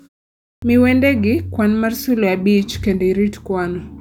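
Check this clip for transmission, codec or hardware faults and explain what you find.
One fault is present, a clipped start after a pause. At 0.39 s, after 0.39 s of silence, the output device had gone idle and needed time to wake and lock again, so sound resumed only at 0.62 s. The first 233 ms of speech is swallowed, and the utterance bursts in abruptly without its opening sounds.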